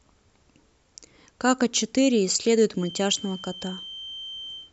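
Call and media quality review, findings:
Feedback whistle, 2.73 s through end of clip. Thin, steady tone near 3.1 kHz sitting under the speech, roughly 15 dB below it, slowly swelling and fading in level. Likely loudspeaker-to-microphone acoustic coupling, loop gain hovering at the edge of instability at that frequency: tone sustains but never escalates into full howl.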